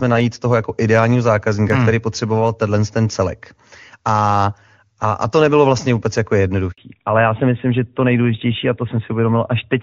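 A handover gap opens at 6.72 s, right after "nebylo vlastně vůbec jako", and lasts 60 ms, until 6.78 s. The call was being passed from one network link to another, and no speech frames arrived while the switch happened. The sound drops out within a few tens of milliseconds and stays silent until the new link begins carrying audio. Whatever was said inside that 60 ms window is lost.

The fallback to narrowband starts at 6.78 s and continues to the end of the clip. After the handover, the call no longer uses the wideband HD Voice codec. Up to this point the clear wideband sound points to AMR-WB at around 23.85 kbit/s. From here it fits the older AMR-NB codec at around 12.2 kbit/s. Nothing above 4 kHz gets through, so the voice loses its upper band and sounds duller than before.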